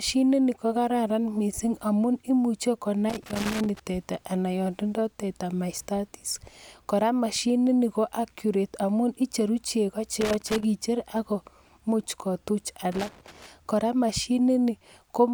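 Loose connector crackle breaks into the speech at 3.10 to 3.80 s, 10.21 to 10.65 s and 12.92 to 13.46 s. A worn contact intermittently drops and restores the line, chopping the signal into irregular scratchy bursts. On a waveform these show as jagged gaps and spikes. A spectrogram shows ragged broadband vertical streaks.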